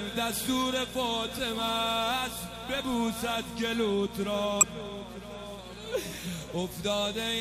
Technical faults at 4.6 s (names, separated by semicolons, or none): mains buzz; compressed frames skipped